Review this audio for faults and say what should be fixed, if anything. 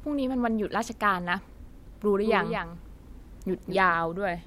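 A doubled audio track runs from 2.09 to 3.95 s: a full-band copy of the speech trails by about a fifth of a second, a few dB quieter and with no decay. It starts and stops abruptly. This is likely a second capture over a slower path. On a spectrogram every feature repeats, shifted right. Route each source through one capture path only.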